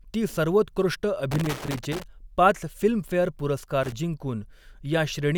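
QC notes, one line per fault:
1.31–2.04 s and 3.83–3.92 s, loose connector crackle: two irregular bursts of scratchy crackle break into the speech, the first lasting about 0.7 s and the second a short flick of roughly 90 ms. A worn or dirty contact in the signal path is opening and closing as it shifts. That chops the signal on and off many times in quick succession, and each break adds a small step that is heard as crackle rather than a clean dropout.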